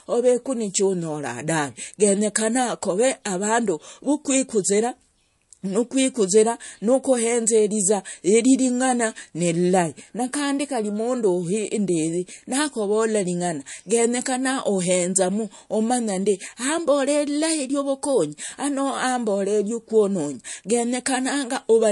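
From start to finish the speech carries plainly audible damage that's likely MP3 compression, pointing to a low bitrate around 48 kbps. Weak detail flickers in and out, leaving a watery, swirly texture with chirpy, metallic s sounds.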